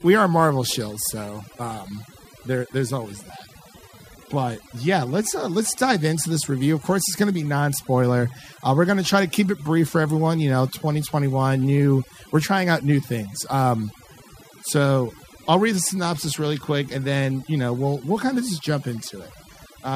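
From start to finish the speech shows overdone noise removal. The noise reduction was set too aggressively, muting individual frequency bands whenever they approach the estimated noise floor, so low-level voice detail disappears too. Pauses collapse into near silence with twinkling specks.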